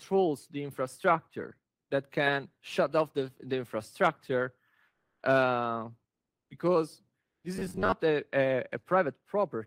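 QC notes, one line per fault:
7.56–7.92 s, robotic sound from repeated short buffers: the sound turns rigid and metallic under a fixed 93.8 Hz buzz. The likely cause is a starved audio path looping a 10.7 ms slice, so about half the real audio is replaced by repeats.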